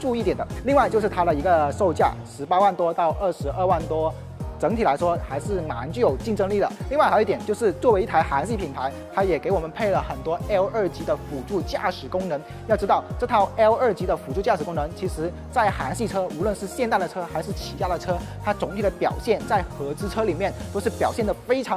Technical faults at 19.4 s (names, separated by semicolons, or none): none